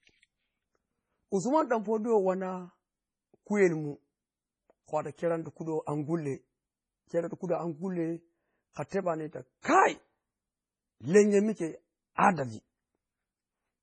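Throughout the speech, heavy damage points to likely MP3 compression at a low bitrate, which fits roughly 24 kbps. Treble stops near 10.2 kHz, and weak frequency lines drop in and out between frames, giving a watery, swirling texture with metallic chirps on s sounds.

Pre-echo appears at 8.73 to 8.76 s and again at 8.89 to 8.92 s. Quantisation noise spread across each transform block spills ahead of sharp attacks, so a brief hiss of 28 ms and then 36 ms precedes them, and the onsets sound soft and smeared.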